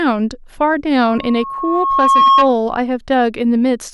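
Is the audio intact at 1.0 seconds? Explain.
Yes, but only just: a loudspeaker feedback squeal begins at 1.04 s and lasts until 2.54 s. A microphone is picking up the loudspeaker it drives, and at 1.1 kHz the gain around that loop exceeds unity, so that one frequency reinforces itself on each pass. It is heard as a single tone that swells over roughly a second until it sits about 5 dB above the speech, and it stops at 2.54 s.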